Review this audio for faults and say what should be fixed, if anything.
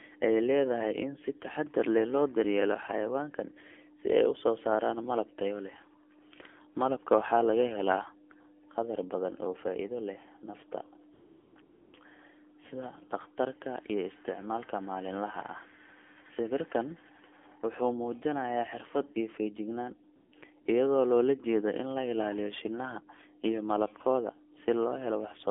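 The speech carries AMR narrowband mobile codec damage throughout. The sound is confined to roughly 250 Hz to 3.4 kHz, and it has a buzzy, synthetic edge from the vocal-tract model working on a few pulses per subframe, which fits a low mode around 7.4 kbps. Simple telephone band-limiting is duller and lacks this artificial buzz.

AMR comfort noise appears at 11.14–11.56 s, 11.62–11.94 s, 20.16–20.32 s and 20.62–20.66 s. In each of these spans the real background is replaced by a smooth, steady synthetic hiss that switches in and out. A noise gate would leave silence in those gaps, not hiss.

To prevent both, carry the call over a wideband codec at a higher mode, and disable or tune discontinuous transmission so that pauses are not cut to comfort noise.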